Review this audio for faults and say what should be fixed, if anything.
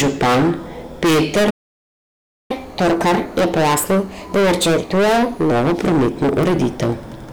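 Hard clipping runs through the whole speech clip. The signal is driven about 23 dB past what the chain can pass, so peaks are sliced flat. Close to a third of all samples were cut flat at the limit. Those flat tops create harmonics high in the spectrum. The result is a harsh fuzz on every loud syllable, not just occasional crackle. Fix it by lowering gain before the converter or the format limit, so peaks stay below full scale.

A playback stall cuts the audio from 1.50 s to 2.51 s. That is a gap of about one second. The sound stops mid-flow and the output goes silent. It then resumes. The likely cause is a player that ran out of buffered data, or a playback thread that was blocked, until it recovered. Prevent it with a deeper playback buffer and a thread that is not starved by other work.

Catch-up at higher speed follows the stall, from 2.51 s to 5.51 s, starting just before "novo prometno". 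The player works off its backlog by resampling at 1.25 times normal speed. Pitch rises with it, by roughly four semitones, so the speech sounds hurried and raised. At 5.51 s it drops back to normal rate. Prevent it by removing the stall, or by using pitch-preserving time-stretching for any catch-up.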